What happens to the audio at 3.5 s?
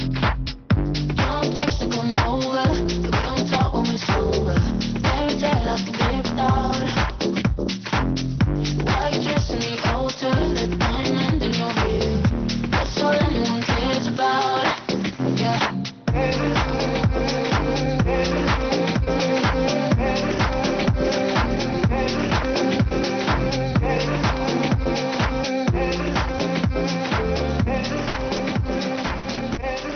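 A lost packet rebuilt from error correction at 3.53 s: the next packet's low-bitrate copy filled the 20 ms frame, so there's no gap, only a brief rougher, noisier patch.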